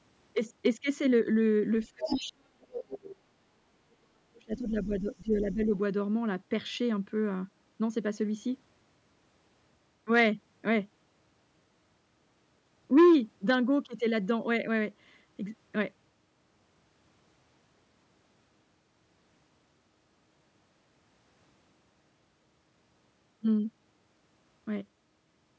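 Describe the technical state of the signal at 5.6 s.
At 5.6 s the talker's speech is heavily ducked, very deep, as part of speech suppressed in double talk from 3.66 to 5.73 s, likely the echo canceller pulling everything down while both sides talked. Underneath, from 5.33 to 5.66 s, a faint second voice, well below the speech, comes through: the other side's voice leaking through, likely loudspeaker echo the canceller missed.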